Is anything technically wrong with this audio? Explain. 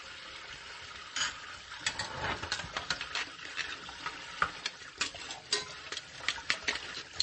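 Yes. Throughout the clip there is plainly audible damage that likely comes from MP3 compression. The encoder ran short of bits, which fits a rate around 32 kbps. It cut everything above 8.4 kHz and dropped weak frequency lines frame to frame, so the sound turns watery and swirly. A spectrogram shows a hard ceiling at 8.4 kHz with flickering holes beneath it.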